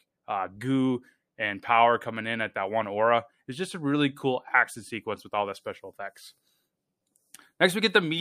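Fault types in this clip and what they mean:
No technical faults can be heard in this speech recording, and the signal stays steady and intact throughout.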